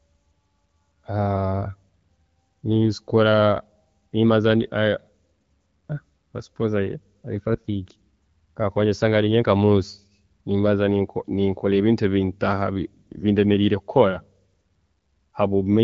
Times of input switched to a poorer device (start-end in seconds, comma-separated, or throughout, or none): none